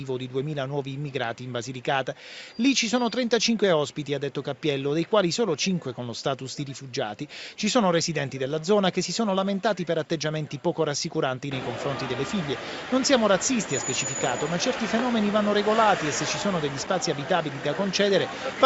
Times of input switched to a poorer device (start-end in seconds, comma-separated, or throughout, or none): none